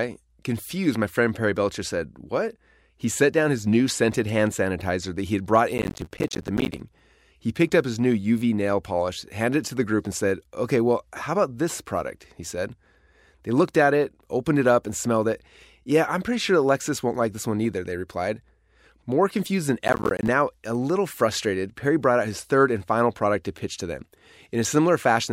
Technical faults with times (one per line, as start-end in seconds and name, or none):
5.78-6.80 processor overload crackle
19.88-20.28 processor overload crackle